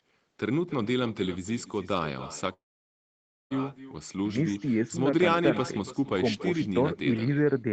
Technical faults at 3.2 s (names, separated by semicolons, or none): echo with no canceller; long network dropout